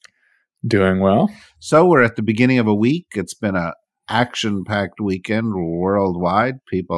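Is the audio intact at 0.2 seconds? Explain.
Yes, at 0.2 seconds the audio is intact, with no audible fault at that moment.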